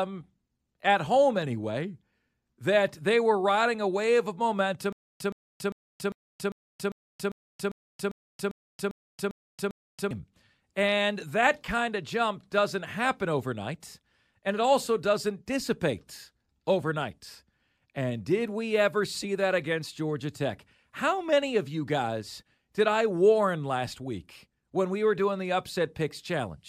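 Stutter with silent gaps from 4.93 to 10.11 s in this speech clip: a 121 ms fragment repeats 13 times every 399 ms with 277 ms silences between, likely from a stalled stream replaying its last fragment, and the audio due in that span is lost.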